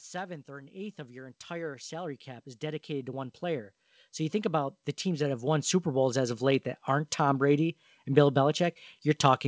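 Speech in which the voice and the background swell together from 0.46 s to 6.49 s, ending just before "that aren't". This is automatic gain rising: the gain control judged the input too quiet and slowly raised its gain by about 20 dB. The audio also passed through a call path with nothing above 8 kHz, which fits a wideband codec such as G.722.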